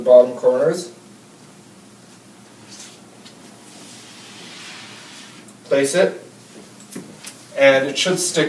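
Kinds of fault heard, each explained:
No technical faults can be heard anywhere.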